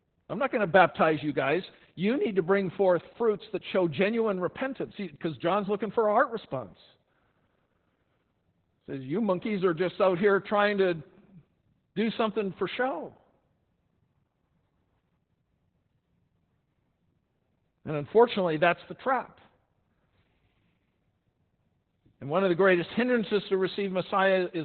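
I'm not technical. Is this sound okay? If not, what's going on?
No. From start to finish the speech sounds muffled, hoarse and slightly robotic, like an old phone line. This is heavy Opus voice compression: the file was squeezed so hard that everything above about 4 kHz was cut away and the remaining sound was coded only roughly.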